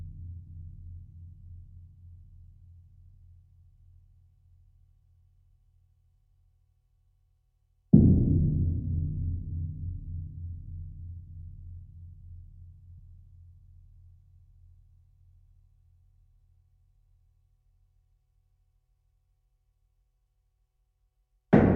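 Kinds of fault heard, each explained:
Compressed frames skipped: near 8.37 s the sound jumps ahead roughly 50 ms, fitting two missing 24 ms frames.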